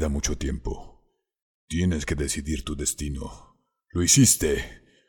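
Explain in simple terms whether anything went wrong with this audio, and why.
Nothing went wrong that I could hear; listening through the whole recording, nothing stood out as a problem.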